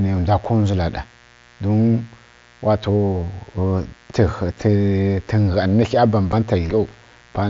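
A dimmer, rectifier or missing shield lets switching spikes from the 60 Hz mains into the signal path, twice per cycle, so harmonics of 60 Hz stack up from the low bass well into the kilohertz range. This is mains buzz, and it runs the whole length of the speech as a steady, raspy drone sitting roughly 30 dB below the voice. It is present under every pause as well as beneath the talking.

At 0.45 s and again at 6.32 s, unconcealed Bluetooth headset packet loss drops a 7.5 ms stretch of audio, which fits a single lost frame between headset and phone. Nothing conceals the gap, so silence or an idle pattern replaces the speech for that instant. Each event is heard as a tiny hole with hard edges, cutting the speech for a fraction of a syllable before it resumes. The mSBC wideband link carrying the speech still passes its band up to 8 kHz around these gaps.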